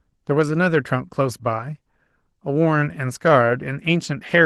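Speech with Opus voice compression all the way through, plainly audible: the hybrid mode's coarse coding gives a grainy, processed edge, which fits a low bitrate around 16 kbps.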